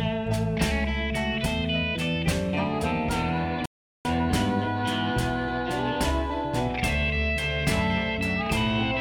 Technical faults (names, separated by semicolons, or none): playback stall